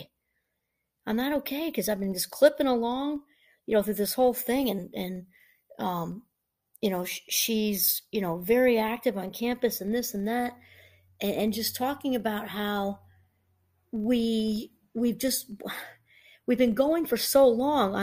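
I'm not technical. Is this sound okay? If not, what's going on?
No. The speech carries a steady buzz throughout, from a filter restarted on every block: it resets 25 times a second, ticking louder as the speech gets louder.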